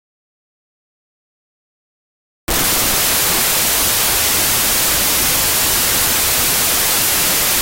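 From the first moment to the end, the clip suffers from a wrong sample width: the data are decoded with a narrower sample than they were stored with, which fits 32-bit integers being read as 16-bit ones. Each original sample splits into two values, one carrying its top bits and the other its low-order bits, which behave like loud noise. The sound is buried under harsh hiss, plays at half speed, and sits an octave low.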